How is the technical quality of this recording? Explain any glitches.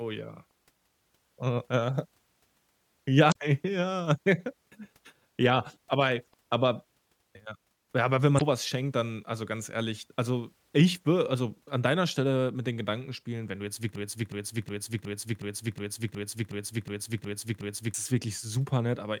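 The technical quality is marred by two kinds of fault: four short bursts from damaged data in the compressed stream, and a long broken-record loop near the end.

The damaged-data glitches fall at 0.46–0.51 s, 3.28–3.36 s, 6.28–6.34 s and 8.35–8.42 s. Each lasts only 50 to 80 ms and sounds like a brief squawk or chirp cutting through the speech. At each one, part of the compressed data has been corrupted. The decoder cannot read those frames properly, loses its place, and hunts for the next valid frame header. The garbled output comes from that resync.

The broken-record loop runs from 13.96 to 17.94 s. A fragment about 0.37 s long plays back to back eleven times, so the speech turns into a mechanical stutter for roughly four seconds. The likely cause is a stall in playback or streaming: the system kept resending the last piece it held instead of advancing. The audio that belonged in that stretch never plays.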